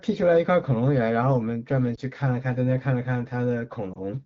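A brief dip or warble in the speech at 1.95 to 2.00 s, and again at 3.93 to 3.99 s, are lost AMR speech frames. Each time, a single 20 ms frame was corrupted, and the wideband decoder filled it by repeating the previous pitch and vocal tract settings at lowered gain.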